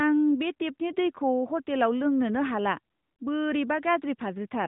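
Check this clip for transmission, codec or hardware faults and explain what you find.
No transmission, codec or hardware faults turn up anywhere in the speech. It has come through an AMR narrowband mobile codec working as intended, with nothing above about 3.8 kHz and only a light synthetic edge, which fits the codec's 12.2 kbps mode.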